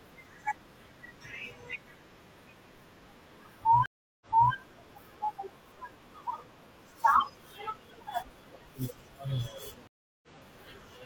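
Stream reconnects at 3.86 to 4.53 s and 9.87 to 10.28 s: the connection dropped, the speech falls silent for about 350 ms, then a fresh decoder picks up mid-stream, replaying 325 ms of already-heard speech the first time and 46 ms the second.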